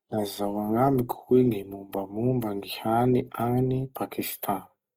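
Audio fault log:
Throughout: Opus compression, likely at a low bitrate near 24 kbps in CELT mode; band energy is held but thin detail is noise-filled, leaving speech grainy and rough.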